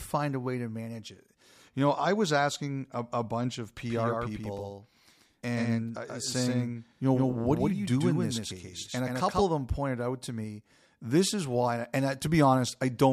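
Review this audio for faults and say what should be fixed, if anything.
From 3.90 to 9.46 s there is a doubled audio track. A dry second copy of the speech trails by about 150 ms. It sits about 5 dB quieter and cuts in and out abruptly. The likely cause is a second, slower capture path or two out-of-step copies in an edit. Record through a single path and remove duplicate clips in the edit.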